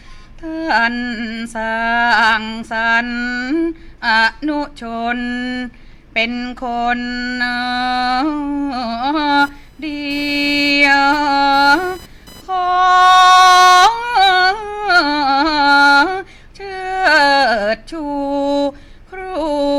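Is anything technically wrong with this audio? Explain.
Yes, there's one problem. From 9.40 to 13.42 s there's computer activity noise: processor or graphics load shifting the shared ground, giving a faint buzzy chirp around 1 kHz, well below the sound.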